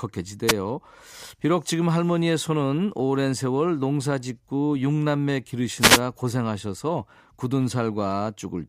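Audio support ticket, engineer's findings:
Wireless microphone noise hit at 0.47–0.53 s and 5.79–6.01 s: brief static swish over the speech, from the analogue FM radio link fading as reflections cancel and receiver noise rises. Noise is added over the speech rather than the speech cutting to silence, unlike a digital dropout.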